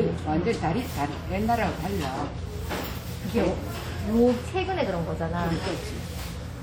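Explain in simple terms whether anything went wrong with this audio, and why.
Throughout the whole clip the sound has a ringing, washy quality with a hiss that swells and fades with it, likely from WMA compression smearing and discarding detail.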